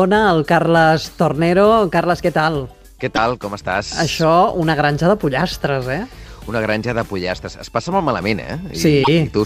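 At 3.15 to 3.18 s and 9.03 to 9.08 s, the audio skips ahead. The likely cause is a broken MP3 bit reservoir: after dropped 26.1 ms frames, decoding drew on another frame's bytes.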